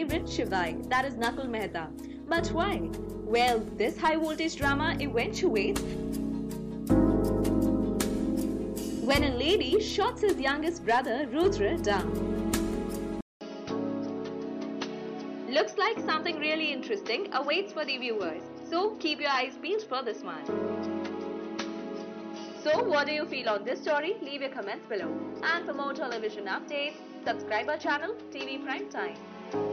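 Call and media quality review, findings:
Sound dulls at 13.21 s after a 200 ms gap, nothing above 6.1 kHz, about 5 dB quieter, faint new noise floor to the end. Likely input switched to a poorer device.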